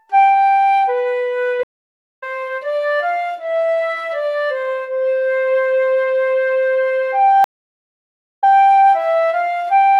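Two stream reconnects here: the audio drops out at 1.63 s for about 0.56 s and comes back roughly 0.3 s further on, then again at 7.44 s for about 0.95 s, resuming 104 ms earlier as the connection restarts with a fresh decoder.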